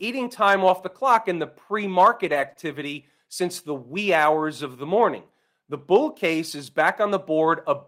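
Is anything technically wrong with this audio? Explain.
Yes, there are two packet-loss problems, both just after "clock in the pre". From 2.25 to 2.51 s there's a lost packet rebuilt from error correction. The packets went missing, but the following ones carried low-bitrate backup copies. The decoder played those, about 140 ms' worth, so nothing drops out. That stretch just sounds rougher and noisier than its surroundings.

Right after, from 2.53 to 2.57 s, comes a short concealed packet loss. About 20 ms of audio arrived too late, and the receiver patched roughly 17 ms of it by extending the preceding sound before blending back in. You hear it as a quick smear or wobble.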